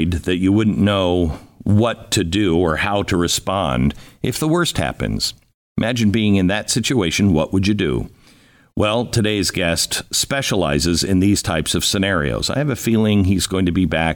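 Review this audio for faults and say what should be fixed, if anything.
No faults heard here, so nothing needs fixing.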